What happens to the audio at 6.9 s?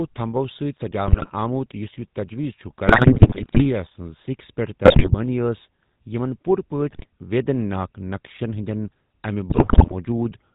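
At 6.91 s, running to 7.06 s just before "ویدین ناك نقشن ہندین", GSM bit errors corrupt the decoder's filter, pitch and gain values for several consecutive frames, which fits a bit error rate of about 4%. The audio breaks into squawks, pops and gargling. A spectrogram shows smeared, misplaced formant energy; the waveform shows abrupt frame-length level jumps.

Under this, and across the whole clip, runs the GSM full-rate codec, which fits a 13 kbps stream. Its pulse-driven vocal-tract model gives a buzzy, gravelly roughness, and the spectrogram shows a hard ceiling at 4 kHz with nothing above it.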